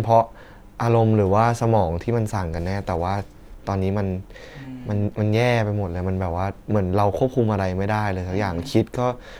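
Speech recording, no technical faults audible anywhere in it.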